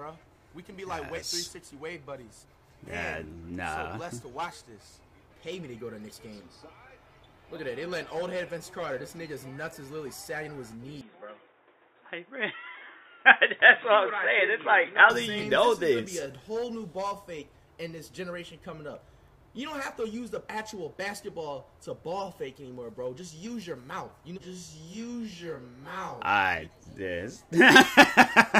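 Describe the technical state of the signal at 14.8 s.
At 14.8 s the sound is dull and boxy, with nothing above 3.8 kHz and a new, faint background noise about 40 dB under the signal. There is no real jump in level and no gap at the change. This is an input switched to a poorer device, most likely a different microphone or a headset's call profile taking over, with its narrower band and its own noise floor. The span runs from 11.01 s to 15.1 s.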